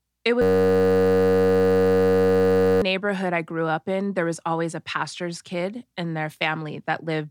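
From 0.42 to 2.82 s there's a system hang loop. The machine froze while the hardware kept replaying one 10.67 ms chunk, which fits a 512-sample buffer, so you hear a steady buzz at about 94 Hz before "I grew up in" finally comes through.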